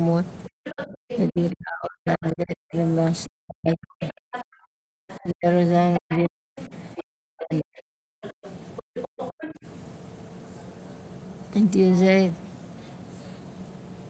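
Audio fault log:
0.48–2.74 s and 3.28–9.65 s: speech suppressed in double talk. The talker's speech repeatedly dips, thins and drops out in pieces, at worst by roughly 40 dB, for about one and a half seconds of the first span and around four seconds of the second. This is likely an echo canceller that heard both parties at once, could not tell the local talker from loudspeaker echo, and attenuated everything to be safe.
0.64–1.19 s, 2.24–2.31 s, 4.03–4.44 s, 5.09–5.18 s, 6.1–6.67 s, 8.22–9.53 s: other side's voice leaking through. A second, fainter voice surfaces under the talker, sometimes as short scraps and sometimes for over a second, sitting about 10 to 25 dB below the speech. This is likely residual far-end audio from the device's loudspeaker that the echo canceller failed to subtract from the microphone signal.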